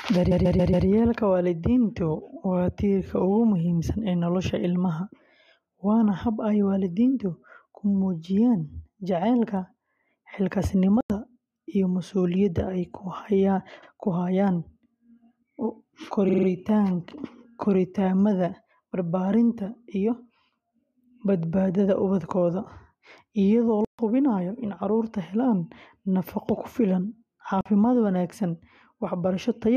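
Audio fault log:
0.30–0.86 s, repeated frames: a rapid stutter, as a 139 ms stretch of speech plays four extra times and adds 0.56 s.
11.01–11.10 s, block of digital silence: a 93 ms hole with an abrupt cut and return. The output was zeroed, which fits a 4096-sample buffer that wasn't filled in time.
13.82–13.89 s, repeated frames: a brief hiccup, as a 70 ms chunk of compressed frames plays twice.
16.28–16.47 s, repeated frames: a fast stutter, as a 46 ms fragment plays four extra times, adding 0.19 s.
23.85–23.99 s, block of digital silence: a 139 ms dropout to dead silence, as the signal jumps to zero and back with no fade.
27.61–27.66 s, block of digital silence: a short 46 ms hole with hard edges, which fits a 2048-sample buffer left empty.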